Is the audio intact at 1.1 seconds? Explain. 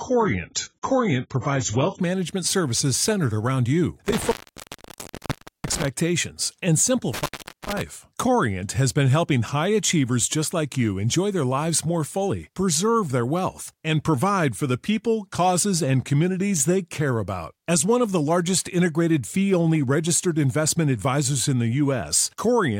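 No, at 1.1 seconds you're inside the opening stretch from 0 to 2.0 s where the adaptive stream is starting at a low bitrate. Nothing comes through above about 7.6 kHz and the codec artefacts are stronger, which fits a low-rate AAC version. Then the quality jumps up abruptly with no gap.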